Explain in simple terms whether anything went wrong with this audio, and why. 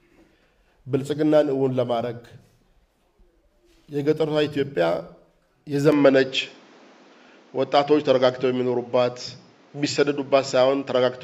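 At 5.92 seconds the recording most likely switched to a poorer input device, such as another microphone, and stayed on it to the end. From there the sound turns duller, with nothing above 7.6 kHz, shifts slightly in level, and carries faint new background noise, with no gap at the switch.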